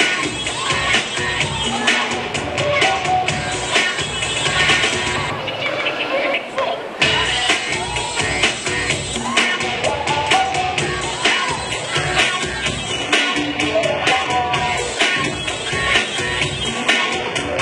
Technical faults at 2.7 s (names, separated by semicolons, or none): none